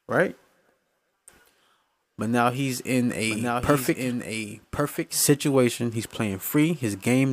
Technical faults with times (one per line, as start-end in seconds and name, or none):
3.29-5.21 doubled audio track